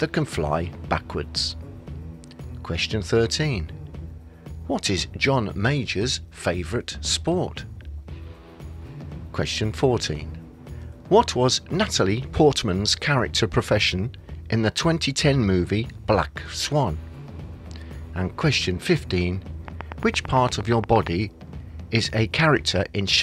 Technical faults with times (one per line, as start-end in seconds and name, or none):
19.68-21.08 train of clicks